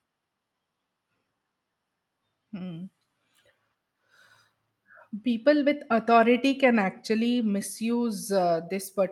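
Speech, with no technical faults to be heard.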